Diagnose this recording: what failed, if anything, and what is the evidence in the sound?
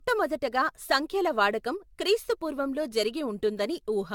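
Codec stage: generation loss runs through the whole speech clip, which sounds swirly, smeared and hollow, with blurred consonant attacks. A spectrogram shows nothing above 17 kHz, consistent with about 96 kbit/s AAC-LC, likely re-encoded around seven times on shifting frame grids.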